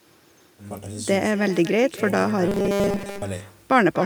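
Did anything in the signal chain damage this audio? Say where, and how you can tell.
Yes. In the call processing stage, no echo canceller removed the far end's loudspeaker pickup, so echo with no canceller runs through the whole clip. The speech is shadowed by a thinner copy about 17 dB down, arriving roughly a fifth of a second later.

From 2.48 to 3.22 s the speech turns into a rigid, metallic buzz at 200 Hz that only loosely tracks the words. This is likely robotic sound from repeated short buffers: when audio arrived late at the driver or buffer stage, the software kept replaying the last 5 ms block, which sets that 200 Hz pitch, while most of the real audio was skipped.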